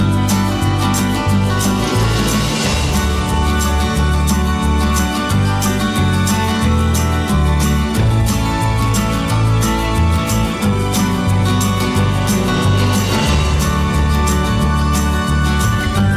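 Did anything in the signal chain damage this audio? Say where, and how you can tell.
No, nothing in the signal chain audibly damaged this audio; the signal sounds intact at every stage from capture to playback.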